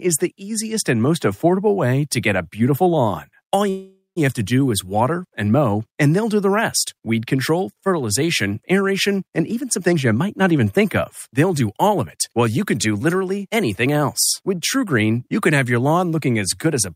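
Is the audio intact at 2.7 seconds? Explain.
Yes, the audio is intact at 2.7 seconds, with no dropout, click, distortion or other fault at that moment.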